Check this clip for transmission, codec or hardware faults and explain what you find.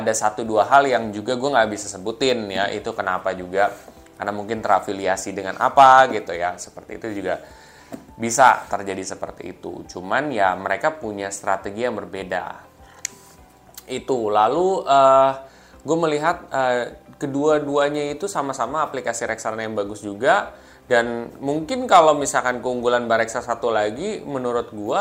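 There's hard clipping in four places: 0.74–0.78 s, 5.78–6.02 s, 8.41–8.50 s and 21.93–22.09 s. The signal overran a stage by about 2 to 4 dB, flattening peaks into brief, harsh crackle.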